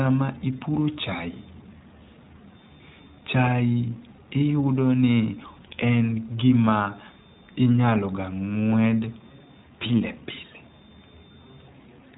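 The speech sounds band-limited and slightly rough, with a synthetic edge from start to finish and nothing above 4 kHz. This is the iLBC codec, coding each short frame's excitation independently, which fits 20 ms frames at around 15 kbps.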